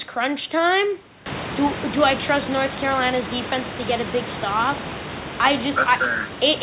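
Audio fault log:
The speech carries no faults, with the room's background noise rising by about 21 dB at roughly 1.5 s and then sitting about 11 dB below the speech, and the call codec passing nothing above 4 kHz, which fits G.711 A-law at 64 kbps.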